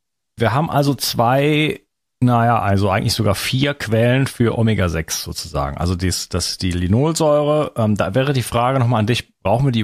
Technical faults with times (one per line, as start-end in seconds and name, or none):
none